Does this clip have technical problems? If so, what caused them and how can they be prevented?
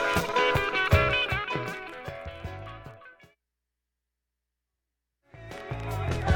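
No, no technical faults present.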